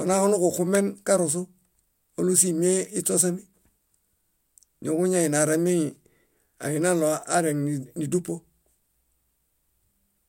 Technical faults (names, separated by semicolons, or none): none